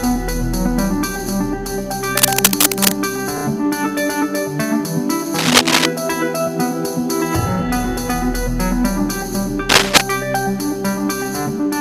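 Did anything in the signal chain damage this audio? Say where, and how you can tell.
Yes. Three bursts of scratchy, rustling noise sit over the sound at 2.17 to 2.92 s, 5.36 to 5.87 s and 9.69 to 10.01 s, each a little louder than the sound itself and uneven in texture. This is cable scratch noise, from the analogue wiring stage. The likely cause is a worn cable, connector or control being moved, so its contact resistance jumps about rapidly and adds dense, irregular noise for as long as it is disturbed.

At 3.38 to 3.44 s the sound catches and stutters, with the same short fragment heard three times in a row. These are repeated frames, introduced at the codec or storage stage. A 32 ms block of compressed data was written or delivered twice more than it should have been, which fits a single repeated frame. The decoder played it again each time, and the audio ended up 64 ms longer.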